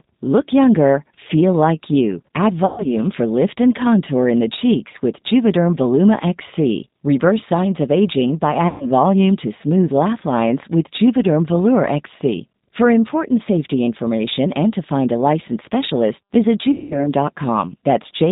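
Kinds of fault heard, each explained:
G.729 codec: Throughout the clip the speech has the slightly rough, synthetic texture of a low-rate VoIP codec, which fits G.729A at around 8 kbit/s. The decoder rebuilds each short frame from a vocal tract filter, a pitch predictor and a few pulses, with nothing above 4 kHz. Unlike a simple low-pass filter, which only dulls the sound, this damage is plainly audible as roughness and grain within the voice itself.
VoIP packet loss concealed by the speech codec: At 2.66 to 2.86 s, 4.92 to 4.96 s, 8.68 to 8.86 s and 16.72 to 17.08 s, lost packets were covered by the decoder, which extended its last pitch and filter at falling gain. The speech is stretched into a sound that fades, longest in the gap near 16.7 s. A plain dropout would be silence or a click. Here the voice stays weak or distorted briefly after each gap.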